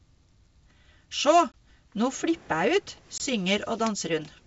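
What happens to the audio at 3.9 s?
Nothing goes wrong at 3.9 s: the speech there comes through intact, carried by the G.722 wideband telephone coding at 64 kbit/s with at most a faint trace of its usual upper-band hiss.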